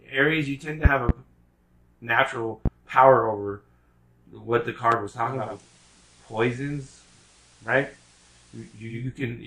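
Loud pops land at 0.85 to 1.12 s (two in quick succession), 2.66 to 2.69 s and 4.92 to 4.95 s, each sharp thump rising roughly 15 dB over the sound, which continues underneath. They are likely voltage pulses from a switch, plug contact or static. Digital radio blending to analogue follows from 5.17 to 9.12 s: after a 452 ms cross-fade to the FM broadcast, the level drops about 1 dB, and hiss sits around 30 dB below the sound.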